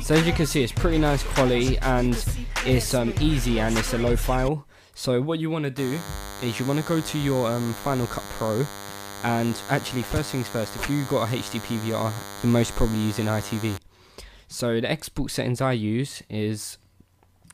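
A nearby DECT cordless phone or base station is transmitting short radio bursts every 10 ms, and the audio circuitry is picking them up and rectifying them into the signal. From 5.77 s to 13.77 s, this DECT cordless phone buzz sits under the sound as a steady, thin 100 Hz buzz with a rasping stack of harmonics. It stays at a constant level, somewhere around 15 dB below the sound.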